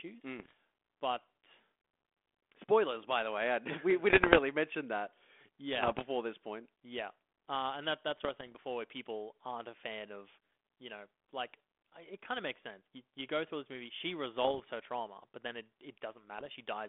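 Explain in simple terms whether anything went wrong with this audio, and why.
Yes. Brief pops and rough, crackly bursts hit at 0.38, 4.1, 5.83, 8.09, 14.43 and 16.38 s. These are bit errors on an ADPCM link, where corrupted data upsets the decoder for a moment.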